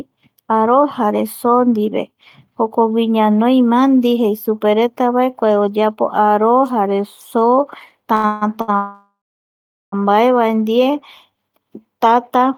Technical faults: short stall from a late packet; call audio freeze; jitter buffer slow-down

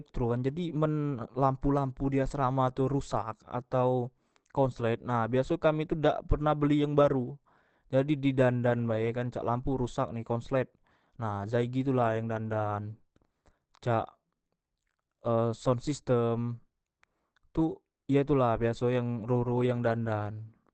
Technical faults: Opus compression

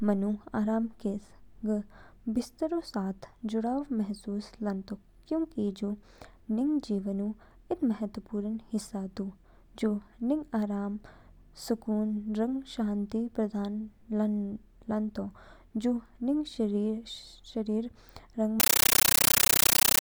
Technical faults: compressed stream played as audio

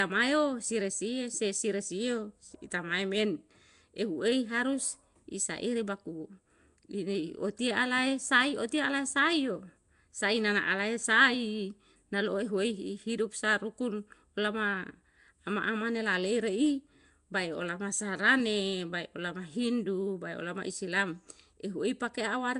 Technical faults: Nellymoser compression

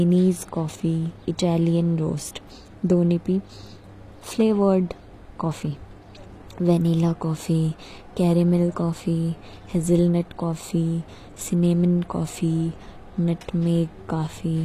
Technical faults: HE-AAC compression

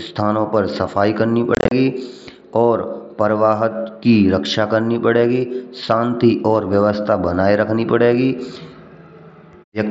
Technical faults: unconcealed Bluetooth headset packet loss

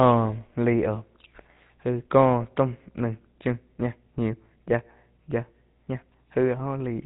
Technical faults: GSM full-rate codec

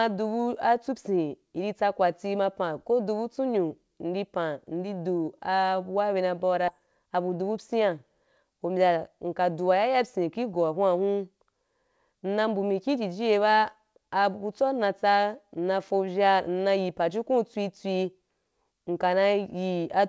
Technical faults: skip ahead; jitter buffer speed-up

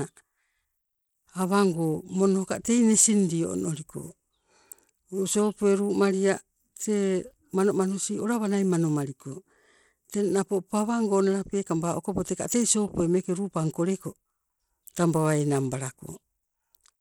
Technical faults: Bluetooth SBC compression

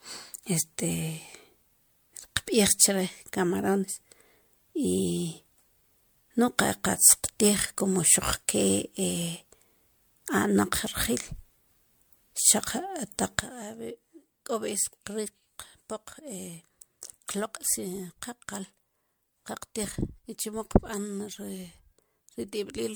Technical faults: generation loss; sudden gain jump

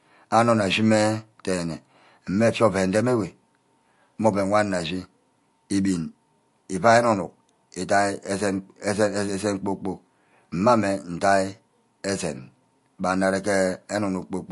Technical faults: MP3 compression

